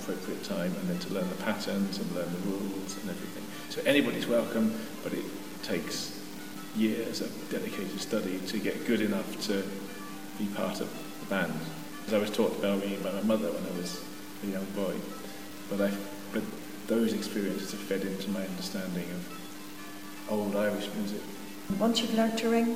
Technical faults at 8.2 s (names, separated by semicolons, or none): low bit depth without dither